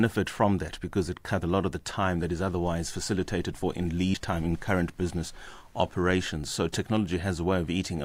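A speech recording with two short bursts of damaged data in a compressed stream, at 1.42–1.46 s after "from that because it" and at 4.11–4.15 s after "otherwise facilitated for in". Corrupt bytes make the decoder misread frames and resync, giving a brief chirp, squawk, click or short hole, seen as thin broadband vertical smears and abrupt waveform discontinuities.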